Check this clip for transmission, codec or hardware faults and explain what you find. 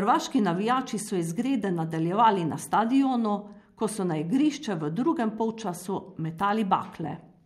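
I found no faults to report.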